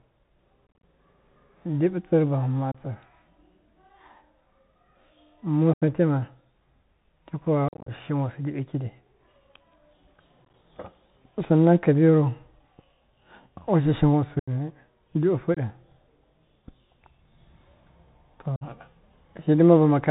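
Throughout, the speech carries the Bluetooth CVSD headset codec: nothing above 4 kHz, scratchy s sounds and a granular hiss from one-bit slope coding, unlike the smoother band-limiting of ordinary telephone codecs. Unconcealed Bluetooth headset packet loss punches abrupt holes at 0.68, 2.72, 5.73, 7.68, 10.45, 14.39, 15.54 and 18.56 s. The gaps run from 22.5 to 142.5 ms of lost audio, with the clusters at 0.68, 7.68 and 10.45 s scattered as choppy crackle, and the speech comes back briefly quieter. It is silence or an idle pattern rather than repeated or smeared sound, so no concealment is at work.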